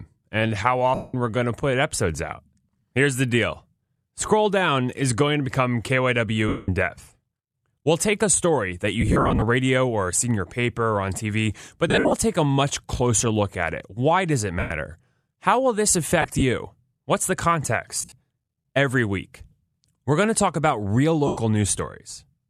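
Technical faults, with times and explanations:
0.95–1.14 s (between "and how" and "we're going to put"), 6.48–6.68, 9.01–9.42 (after "take a story that"), 11.88–12.13, 14.59–14.71, 16.22–16.42, 17.97–18.14 and 21.27–21.37 s (after "to talk about real"): lost LE Audio frames. Each gap, about 100 to 250 ms, turns the sound into a hissy smear. The LC3 decoder keeps replaying the last spectrum with scrambled phase and fades it out. The gaps at 9.01, 11.88, 16.22 and 17.97 s come as short scattered dropouts rather than one solid hole, and the timing fits 7.5 ms frames.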